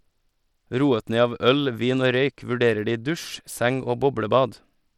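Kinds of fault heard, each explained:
Bluetooth SBC compression: gritty, coarsely quantised speech with flickering treble, likely from SBC at a bitrate around 96 kbps; the spectrogram shows patchy, blinking upper bands.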